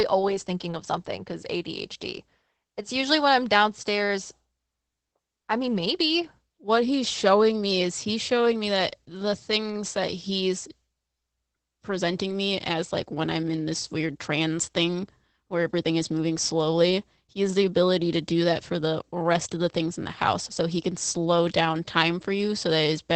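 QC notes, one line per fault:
throughout: Opus voice compression. The speech has nothing above 8.6 kHz and sounds muffled, hoarse and faintly robotic, consistent with SILK wideband coding at a low bitrate near 12 kbps. The coarse excitation roughens the voice itself, which a plain low-pass filter would not do.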